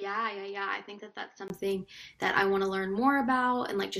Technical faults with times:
0.00-1.50 input switched to a poorer device

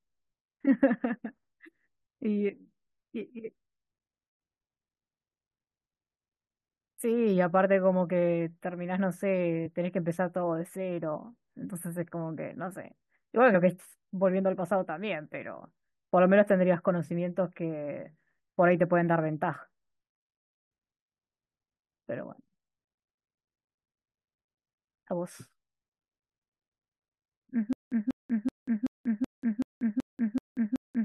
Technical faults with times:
7.92 compressed frames skipped
9.65 compressed frames skipped
13.53 compressed frames skipped
27.73-31.05 stutter with silent gaps

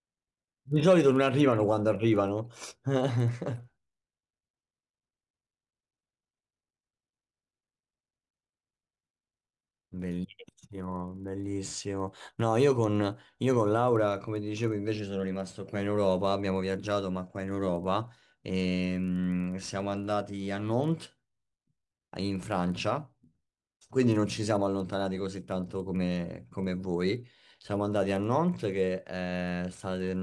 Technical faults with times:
0.00-30.23 resampler restarted on every block

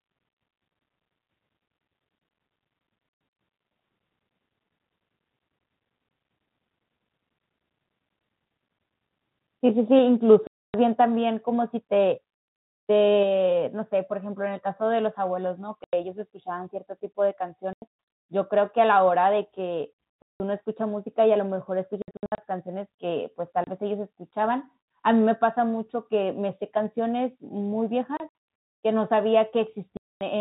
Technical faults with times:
9.99 microphone volume stepped down
10.47-10.74 packet loss filled with silence
11.01 microphone volume stepped down
13.23 microphone volume stepped down
15.84-15.93 packet loss filled with silence
17.73-17.82 packet loss filled with silence
20.22-20.40 packet loss filled with silence
22.02-22.38 packet loss filled with silence
23.64-23.67 packet loss filled with silence
28.17-28.31 packet loss filled with silence
29.97-30.21 packet loss filled with silence

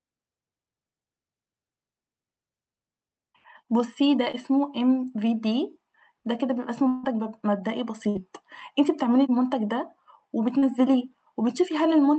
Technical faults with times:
4.31-4.35 short concealed packet loss
6.87-7.05 long network dropout
8.09-8.17 burst of packet loss
10.59-10.64 short concealed packet loss

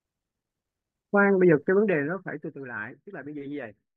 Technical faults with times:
1.75-2.65 zipper noise

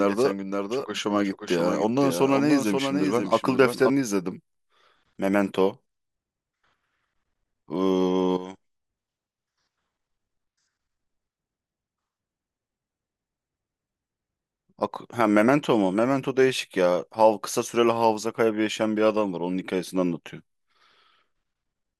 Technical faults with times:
0.00-3.90 doubled audio track

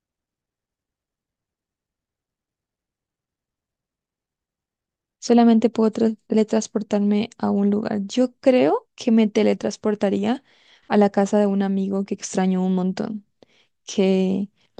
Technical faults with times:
none

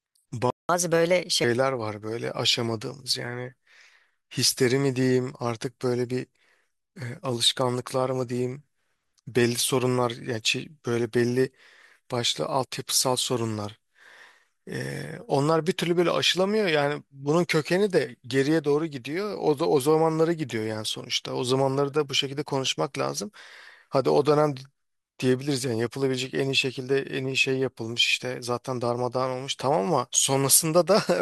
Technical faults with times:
0.50-0.69 playback stall
0.69-1.44 catch-up at higher speed

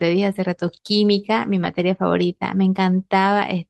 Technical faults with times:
0.67-0.69 lost packet rebuilt from error correction
1.63-1.65 lost packet rebuilt from error correction

